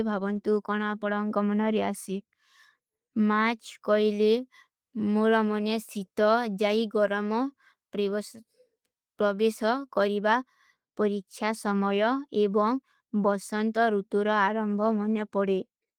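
There are no technical faults to describe at any point in this speech.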